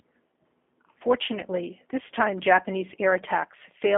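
G.729 codec damage runs throughout this speech clip: the sound is confined to roughly 250 Hz to 3.4 kHz and is plainly rough and synthetic, as each 10 ms frame is rebuilt from a vocal tract filter, pitch predictor and sparse pulses, which fits an 8 kbit/s G.729A stream.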